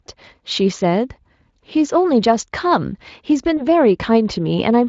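A speech clip with a brief smeared patch from 3.57 to 3.67 s that fades and leaves the sound weak or distorted before it recovers. This is VoIP packet loss concealed by the speech codec. About 20 ms of audio went missing, which fits a single lost frame, and the Speex decoder, running at 23.8 kbps, filled the gap by extending its last pitch and filter with falling gain.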